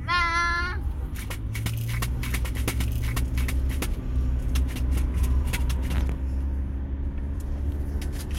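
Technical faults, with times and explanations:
2.07–6.07 s: doubled audio track. A second copy runs about a second behind at roughly equal level, likely from a slower capture path mixed back in. Unlike echo or reverb, it repeats once, with no decay or room colour, and cuts in and out abruptly.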